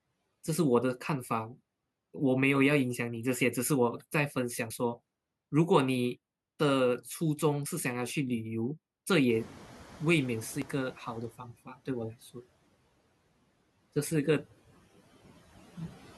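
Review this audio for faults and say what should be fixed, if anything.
Audio missing between chunks: skips at 4.70, 7.66, 10.62 and 13.57 s, evenly spaced about 3 s apart. Each drops a short slice of sound, roughly 40 ms, and the two sides butt together with no gap. This is likely a recorder or processor losing audio as it closes one chunk and opens the next, which fits chunks of about 3 seconds. To prevent it, hand chunks over with overlapping or double buffering so no samples are discarded at the boundary.

Noise suppressor catching up: from 9.29 to 11.32 s. When the room noise jumps by about 21 dB around 9.5 s, it first passes through with little reduction, then sinks over about 2.1 s as the suppressor's noise estimate adapts, ending about 11 dB lower. To prevent it, use a suppressor whose noise estimate tracks sudden level rises faster.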